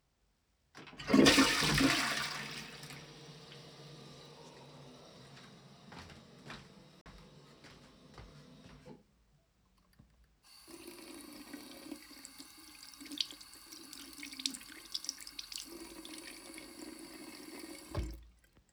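A recording of everyday sounds, with one block of digital silence from 7.01 to 7.06 s. The audio drops out for about 46 ms and returns with no fade. The length fits a 2048-sample buffer left unfilled in time.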